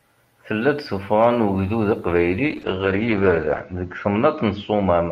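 Speech with a call bitrate drop from 2.5 s, just after "ugdud aqbayli", to the end. The bandwidth estimate collapsed, so the encoder lost most of its bit budget, which fits a fall from around 48 to 8 kbps. Coarser coding makes the audio rough and watery, and the bandwidth narrows to 8 kHz, leaving it muffled.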